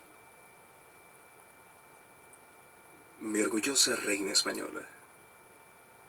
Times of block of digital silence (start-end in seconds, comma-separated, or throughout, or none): none